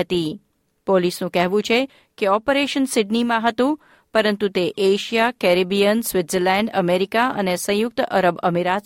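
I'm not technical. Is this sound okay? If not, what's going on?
Yes, nothing is wrong here.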